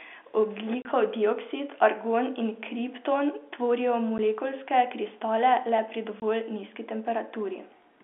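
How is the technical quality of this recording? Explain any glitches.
Three brief dropouts are the main problem. They come from packet loss filled with silence, at 0.82–0.85 s (30 ms), 4.18 s (10 ms) and 6.20–6.22 s (20 ms). Chunks of audio went missing in transit and the receiver played dead silence instead, so each gap has hard edges. The lengths step in 10 ms, which fits 10 ms packets. The speech comes through G.711 telephone coding, in a phone-line band of 250 Hz to 3.5 kHz.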